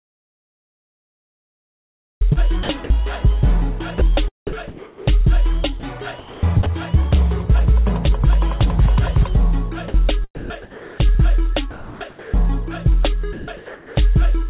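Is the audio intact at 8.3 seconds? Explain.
Yes, the audio is intact at 8.3 s, with nothing breaking up, dropping out or glitching there, and the only thing audible is the narrow, telephone-like band of the G.711 call path, with nothing above 4 kHz.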